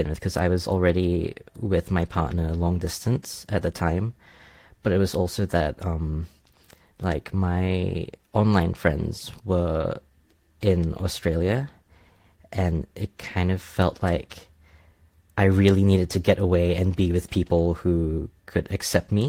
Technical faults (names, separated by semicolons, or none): none